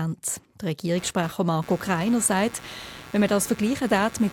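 From 0.96 s to the end of the speech, a buzzing, chirping layer of computer activity noise sits under the signal, pulsing at around 150 Hz and roughly 20 dB below the speech. Changing load on the processor, graphics card or mouse shifts the ground that the computer shares with the audio circuit, so the interference rises and falls with the machine's activity rather than with anything in the speech.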